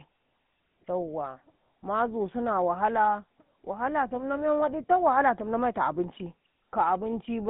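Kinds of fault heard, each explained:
GSM full-rate codec: throughout, the speech passes through a vocal-tract model driven by sparse, regularly spaced pulses, leaving a plainly audible buzzy, gravelly roughness. Nothing reaches above 3.8 kHz, and the thin sound fits a 13 kbps GSM full-rate stream.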